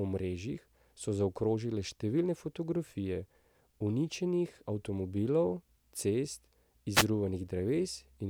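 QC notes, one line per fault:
6.92–7.06 s, wireless microphone noise hit: brief static swish after "uničenih avtomobilov cest" as the FM radio signal fades and receiver noise rises.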